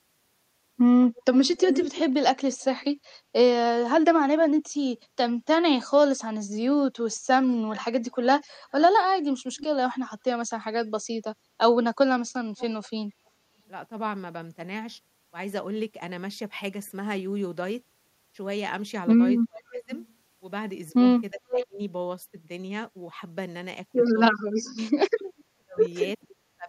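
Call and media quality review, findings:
Echo leak at 1.16–2.84 s, 7.52–9.66 s, 12.58–12.89 s, 19.70–19.84 s, 21.53–21.66 s and 25.38–26.27 s. A delayed speech copy is audible at 273 ms, 368 ms, then 442 ms, ranging from barely below the speech to faint. The likely cause is the far-end loudspeaker echo canceller passing residual echo. On a spectrogram it shows as time-shifted duplicate harmonic traces.

Speech suppressed in double talk at 19.44–21.79 s and 24.4 s to the end. The talker drops by up to about 30 and 35 dB, for about a second in total each time, likely because the echo canceller is ducking during overlap. On the waveform the envelope is notched.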